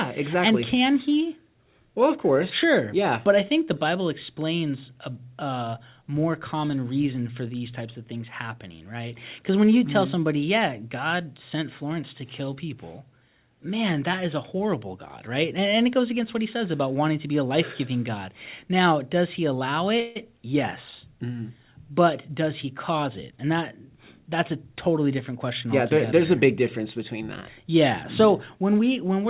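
A speech recording carried over a narrowband call path, its spectrogram empty above 4 kHz as a 64 kbps G.711-style codec would leave it, with two faults. Just after "does he allow", from 20.00 to 20.17 s, a call audio freeze fills about 154 ms with a decaying buzzy continuation, a smeared, fading band on the spectrogram, likely from packets stalling and emptying the jitter buffer. From 22.03 to 24.95 s, ending before "different question", a jitter buffer speed-up plays the speech about 5% fast at unchanged pitch, trimming roughly 150 ms of pitch periods; the waveform shows slightly compressed syllable spacing.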